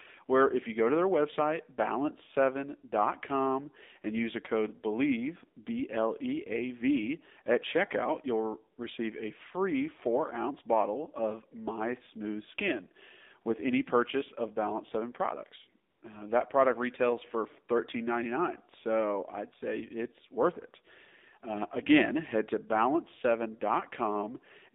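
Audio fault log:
throughout, AMR narrowband mobile codec: the whole clip has that squeezed phone-line sound. The band sits roughly between 200 Hz and 3.7 kHz, so there's no air or sibilance up top and not much body down low. On top of that, the speech has a buzzy, synthetic edge where the codec rebuilds the voice from a vocal-tract model and a handful of pulses. Damage that plain fits one of the lower AMR-NB modes, around 7.4 kbps.
15.90–16.02 s, AMR comfort noise: for about 120 ms the real background drops out and a smooth, steady hiss takes its place, then the normal sound switches back in. The phone decided nobody was talking and stopped sending speech frames, so the receiving end filled the gap with noise it generated from a rough description of the background's level and spectrum. The switch in and out is the giveaway.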